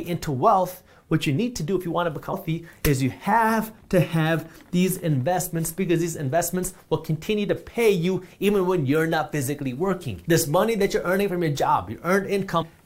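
At 2.32 s, compressed frames were skipped. The decoder never played a run of frames, either because they were missing or because it rejected them as damaged. The join at 2.32 s points to roughly ten frames of about 23 ms each, so the audio lurches forward by around 200 ms. The same fault returns from 12.61 to 12.63 s, where a shorter gap of roughly four frames drops about 100 ms of sound at the join.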